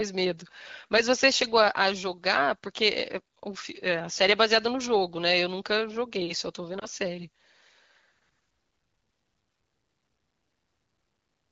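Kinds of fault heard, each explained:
Lost AMR speech frames: one 20 ms frame near 6.8 s is rebuilt from the last, heard as a brief warble, a smeared spectrogram dip.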